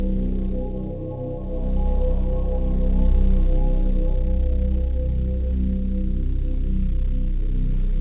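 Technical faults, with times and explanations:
No faults found; the sounds come over a WebRTC call path using G.711 mu-law at 64 kbps, which leaves nothing above 4 kHz, as that codec does by design.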